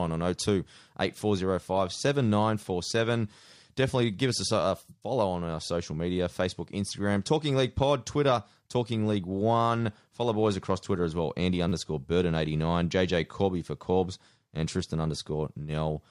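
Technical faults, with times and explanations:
11.69 to 11.72 s, repeated buffer: fresh audio reached the output late, so the last block of speech played again, and the span points to a piece of about 10 ms sounding three extra times. With blocks that short, the result comes across as a click or brief buzz rather than a stutter, and almost nothing is lost. A waveform shows identical 10 ms shapes side by side, with abrupt steps where they join. A spectrogram shows thin vertical lines at those joins.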